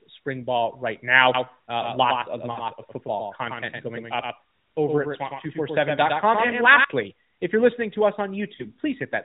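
Right after "spring ball right", at 1.34 s, a doubled audio track kicks in. A second full-band copy of the speech sits roughly a tenth of a second behind the original and about 5 dB quieter, so everything gets a dry, slappy echo with no room tail. It cuts off just as abruptly at 6.84 s, before "if you're listening to". That hard start and stop with no decay points to the signal likely being captured twice along a slower path.

Inside that stretch, from 2.52 to 2.58 s, there's a short warbly dip of about 40 ms. That's lost AMR speech frames: the decoder couldn't use those frames, so it repeated the last good pitch and vocal-tract settings with the gain falling away, and the speech smears briefly before recovering. The same thing happens for about 20 ms at 6.48 s, and again for a similar blip at 8.56 s, just after "you're listening to us". Throughout, the narrowband mobile-codec sound is there with its 4 kHz ceiling and a light synthetic edge, which fits AMR-NB's 12.2 kbps mode.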